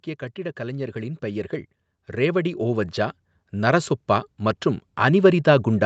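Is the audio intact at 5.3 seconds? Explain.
Yes, the speech is intact at 5.3 seconds, with no dropout, glitch or other fault at that moment.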